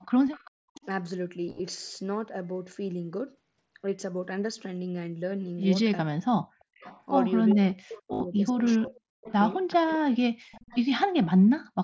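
It's a speech recording from a call, carried over a Bluetooth mSBC headset link with audio topping out at 8 kHz. There's an echo leak from 0.27 to 0.86 s, 6.8 to 8.02 s, 8.65 to 9.32 s and 10.52 to 11.26 s: a faint copy of the far side trailing by 392 ms, at about 25 dB below the speech (about 20 dB in the 6.8 s stretch), likely a speakerphone whose echo canceller isn't fully removing its own loudspeaker. Speech suppressed in double talk hits 0.76 to 0.83 s with a dip of around 20 dB, then 6.06 to 6.5 s and 7.54 to 10.04 s with drops as deep as roughly 40 dB, where the canceller likely ducks the talker while both sides overlap. Concealed Bluetooth headset packet loss shows up at 1.46 to 1.60 s, with about 83 ms lost in short bursts up to 30 ms, and at 8.13 to 8.21 s, with about 68 ms lost. In both spots, repeated waveform fill gives a brief buzzy texture.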